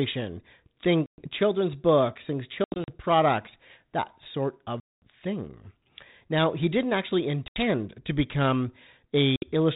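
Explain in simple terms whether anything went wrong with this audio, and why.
Packet loss on an ADPCM call breaks up this speech five times: at 1.06 s (about 120 ms missing), around 2.64 to 2.91 s (several short gaps adding up to 140 ms), at 4.8 s (the longest, about 220 ms), at 7.48 s (80 ms) and at 9.36 s (60 ms). Small chunks of the call never arrived and were filled with silence. Unlike a simple dropout, the sound comes back slightly wrong, with a click, a level jump or brief roughness. That happens because this phone codec sends only changes from a running guess, so the receiving end loses track and needs a few tens of milliseconds to catch up.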